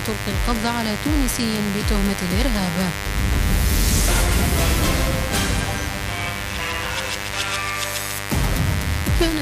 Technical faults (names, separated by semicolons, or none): mains buzz